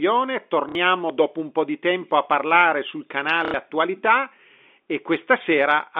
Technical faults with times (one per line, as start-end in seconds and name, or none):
0.69-0.75 packet loss with last packet repeated
3.45-3.54 packet loss with last packet repeated